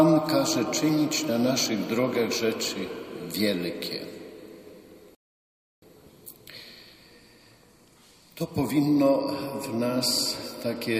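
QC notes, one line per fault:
5.15 to 5.82 s, rebuffering stall: the audio just drops to dead silence for about 0.67 s, then picks up again exactly where it left off. That's the player running dry on downloaded data and sitting there waiting for more to arrive before it carries on. Nothing gets skipped or chopped out, so the material on either side joins up cleanly, but the clip ends up roughly two-thirds of a second longer than it should be.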